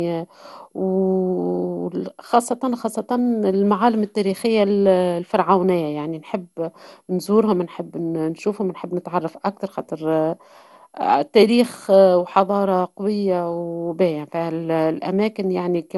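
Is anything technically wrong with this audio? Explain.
Yes. Throughout the speech there is generation loss: the sound is swirly and hollow, consonant attacks are smeared, and nothing reaches above about 11.9 kHz. The dullness and watery texture go beyond what a single lossy encode would leave. The likely cause is repeated lossy coding, something like five rounds through an MP2 codec at a rate that fits 96 kbit/s. Each decode and re-encode quantised the signal again on a shifted frame grid, so noise piled up.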